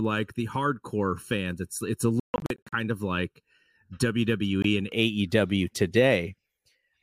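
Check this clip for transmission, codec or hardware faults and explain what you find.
Two problems here: comb filtering over the first two-thirds and a couple of gaps that sound like Bluetooth.

Channel delay (comb filtering) runs from 0 to 4.92 s. One channel lags by roughly 0.7 ms and is summed to mono, carving evenly spaced notches from around 700 Hz. The speech sounds hollow and phasey.

The Bluetooth dropouts are at 2.20 to 2.73 s, where about 325 ms of speech goes missing in scattered holes up to 142 ms long, and again briefly at 4.62 to 4.65 s. They're likely late packets being dropped. The speech drops out and resumes further along, as if it had kept playing.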